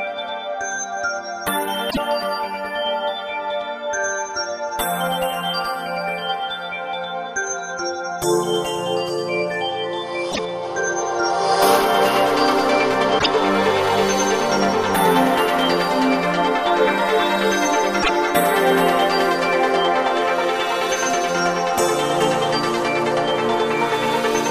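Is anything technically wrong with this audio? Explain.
Yes. Brief glitches of about 0.11 s break in at 1.87–1.98, 10.28–10.39, 13.15–13.26 and 17.99–18.10 s. This is damaged data in a compressed stream: corrupted bytes make the decoder misread frames and resynchronise.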